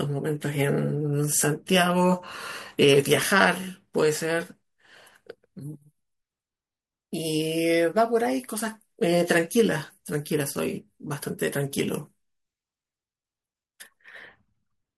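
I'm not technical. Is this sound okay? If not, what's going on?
Yes, this sound is okay, and there's nothing going on with it that needs fixing.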